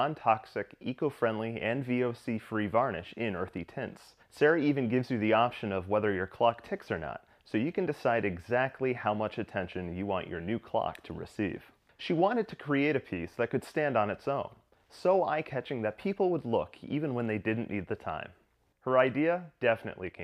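No technical faults are audible anywhere in this audio.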